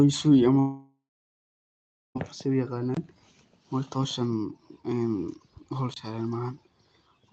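A long network dropout runs from 0.59 to 2.17 s, likely caused by packets failing to arrive. The receiver stretches the last sound into a fading buzz, then about 1.1 s of near-silence follows, and the speech resumes with roughly 1.56 s of material simply gone.

A block of digital silence appears at 2.95 s and again at 5.94 s, each about 23 ms long. This fits a 1024-sample output buffer left unfilled. The signal cuts out and back with no fade, leaving a short hole each time. Through both faults, the call path's Opus coding limits the audio to about 8 kHz.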